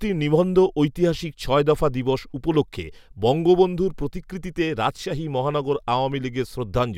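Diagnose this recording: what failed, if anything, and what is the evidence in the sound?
Nothing failed; no fault is audible in the recording.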